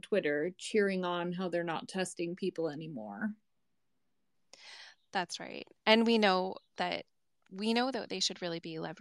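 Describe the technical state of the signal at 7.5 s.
At 7.5 s the speech signal is intact, with no audible fault at that moment.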